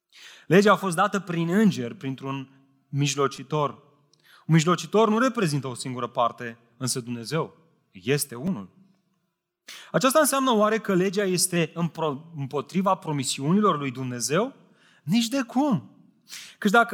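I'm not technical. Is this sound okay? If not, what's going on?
No, there are two kinds of glitch in this speech. Drift correction step, from 0.81 to 1.67 s and again from 11.56 to 12.13 s (between "că legea" and "împotriva promisiunilor lui"): playback speed jumps by about 6%, shifting the pitch about a semitone, then snaps back. This is likely software nudging the speed to keep two clocks in step.

Repeated buffer, at 3.37 s and 8.47 s: a tiny slice of sound plays over and over, three extra times then two, which fits a 5-millisecond buffer. New audio arrived late, so the last piece was repeated. It's heard as a brief click or buzz.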